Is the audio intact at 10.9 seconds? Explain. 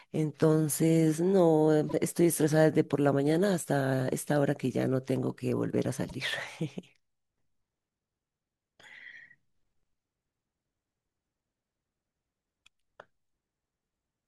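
Yes, at 10.9 seconds the speech is intact, with no dropout, click, distortion or other fault to be heard at that moment.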